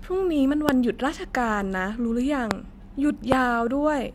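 Three loud pops land on the speech at about 0.69, 2.51 and 3.32 s, each a single sharp click roughly 20 ms long, the last one a touch hotter at about 25 dB over the signal. Likely a voltage spike from a switch, static or driver glitch.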